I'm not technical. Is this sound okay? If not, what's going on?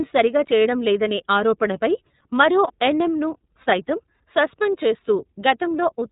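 No. The whole recording has passed through the iLBC codec, a compression system used for internet phone calls. It keeps only the lower part of the sound, so everything above about 4 kHz is missing, and the damage is plainly audible. The speech sounds dull, slightly rough and a bit synthetic. A muffled microphone would only soften the sound, but this codec also adds that faintly artificial, rough grain to the speech.

There are also lost iLBC frames, at 2.67 to 2.71 s, just after "సరిగా చేయడంలేదనే ఆరోపణపై మరో". A small chunk of data, about 30 ms, never arrived. The decoder filled the hole by repeating the last bit of sound with some noise mixed in. You hear a brief held, buzzy smear rather than silence or a click, and the voice is normal again right after.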